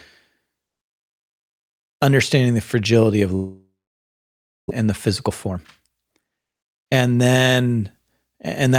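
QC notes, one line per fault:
3.35–4.72 s, long network dropout: after "understanding the fragility of" a fading buzz gives way to almost 1 s of silence; likely lost packets, with 1.0 s of speech never played.
4.80–6.46 s, jitter buffer speed-up: speech sounds hurried at 120% speed with unchanged pitch, as the receiver trims pitch-period slices, roughly 0.3 s in total, to shed backlog.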